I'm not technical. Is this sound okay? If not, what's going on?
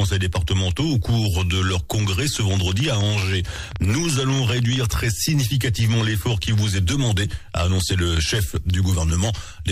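No. From 2.37 to 4.77 s there's a train of clicks, around 30 uneven ticks, likely from electrical interference or a faulty connection or power supply.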